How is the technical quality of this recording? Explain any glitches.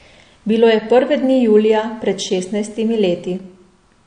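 The recording is noticeably degraded by lossy compression that runs through the whole speech clip. The damage is most likely from MP3 compression at a low bitrate, consistent with roughly 48 kbps. With so few bits, the encoder discards everything above about 9.8 kHz and zeroes weaker frequency lines that flicker on and off between frames. The speech therefore sounds dull, with s sounds losing their crisp top, and carries a plainly audible watery, swirling texture.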